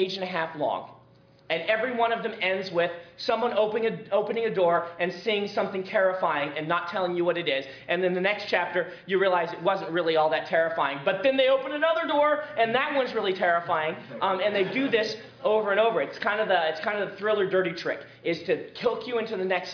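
No technical faults can be heard anywhere in the recording, and the signal holds steady throughout.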